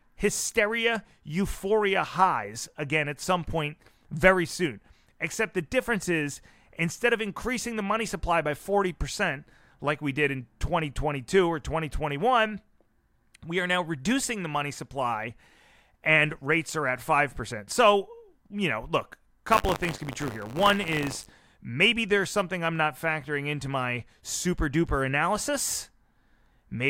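From 19.48 to 21.32 s the speech takes on a robotic rattle at 100 Hz. This is buffer tearing. The program filling the ring buffer and the hardware draining it have slipped until their positions cross inside each period. A small slice of every buffer, roughly 7%, replays audio from around 40 ms earlier, with abrupt joins on both sides. On a waveform, hard discontinuities recur every 10 ms. A spectrogram shows regular vertical striping and a 100 Hz harmonic comb wherever speech is present.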